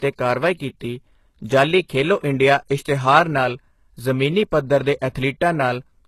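From the start, the whole recording carries plainly audible codec damage. Nothing reaches above about 12.3 kHz. The top band sounds artificial. Its harmonics do not line up with those below the crossover. S sounds come out gritty and lispy. The likely cause is HE-AAC compression at a very low rate, which fits a bitrate around 16 kbps. That codec keeps only the lower spectrum. It rebuilds the treble by copying lower bands upward under a coarse envelope.

At 2.20 to 2.24 s there is pre-echo. A hiss, about 35 ms long, runs just ahead of a sharp attack. The attack itself sounds soft and smeared. The codec spreads its quantisation noise evenly across a whole transform block. Here the attack fell late in that block. Noise sized for the loud onset therefore leaked into the quiet moment before it.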